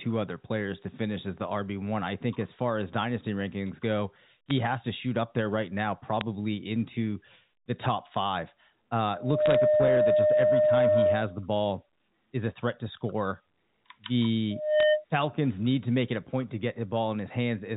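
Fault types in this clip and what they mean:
Bit errors on a digital phone line: Flipped bits in the telephone stream knock single samples way off, so you get sharp little ticks and brief crackle over the speech, in four short bursts around 4.49, 6.21, 9.46–9.55 and 14.80 seconds.
Loudspeaker feedback squeal: The mic is hearing its own loudspeaker, and at 608 Hz the loop gain tops one, so that tone climbs over about a third of a second to roughly 10 dB above the speech, from 9.13 to 11.44 s and again 14.50 to 15.05 s.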